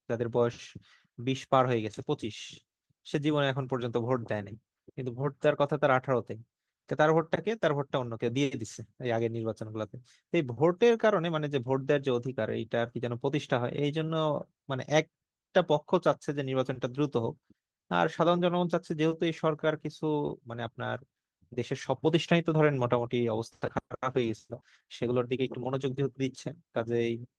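Speech, with no faults heard.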